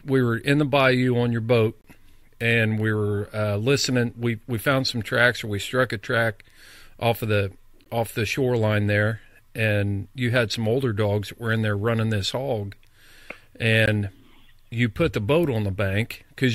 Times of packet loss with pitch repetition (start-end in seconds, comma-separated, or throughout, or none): none